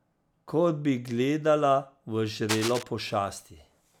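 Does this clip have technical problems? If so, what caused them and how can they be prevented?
Yes. From 2.49 to 2.83 s, dense, uneven scratching rustles over the speech at nearly its level. This cable scratch noise likely comes from a worn cable or connector being moved, making its contact resistance jump rapidly. Replacing worn leads and securing cables prevents it.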